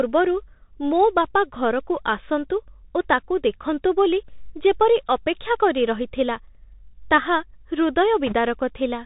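A speech clip carried over a Bluetooth CVSD headset codec throughout, which fits a 64 kbps link. Nothing above 4 kHz survives. S sounds turn scratchy, and a granular hiss sits under the speech. From 8.27 to 8.35 s, bit errors on the Bluetooth voice link add a brief rushing crackle. The error rate sounds like a few percent, and there are no sharp clicks.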